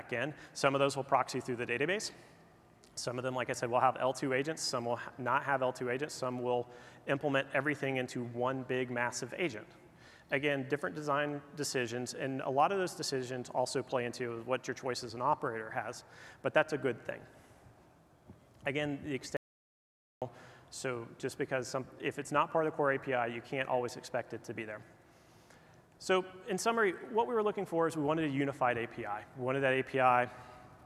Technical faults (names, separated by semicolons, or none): audio dropout to silence